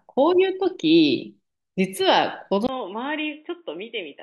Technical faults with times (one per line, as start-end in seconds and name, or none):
2.67-4.23 input switched to a poorer device